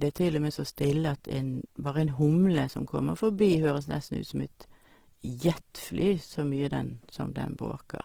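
Throughout, the speech sounds grainy and rough, likely from Opus compression filling starved bands with noise; a spectrogram shows speckled, smeared texture up to 20.4 kHz.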